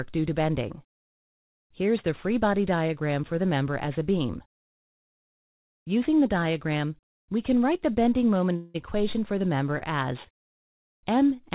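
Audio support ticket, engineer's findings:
8.56 to 8.77 s: audio hangs about 0.18 s, last sound smeared into a fading buzz, then resumes where it stopped, nothing lost. Likely a call audio freeze: packets delayed in transit, jitter buffer ran dry, receiver concealed the wait.

9.78 to 9.84 s: brief 30 ms hold on one sound, faint buzz, playback continues from the same point. Short stall from a late packet; jitter buffer starved, concealment stretched audio until arrival. Band-limited to 4 kHz by the mu-law call codec.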